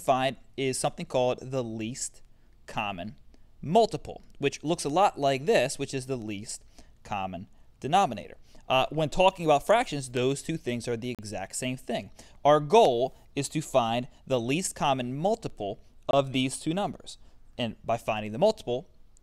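At 11.15 s the audio drops out to dead silence for about 39 ms, and at 16.11 s it happens again for about 22 ms, then picks back up. Both gaps sound like a Bluetooth stall, likely from interference holding up packets long enough that the headphones' buffer ran empty. Playback just sits silent until the resent data shows up, so you hear two brief, clean holes rather than crackle or distortion.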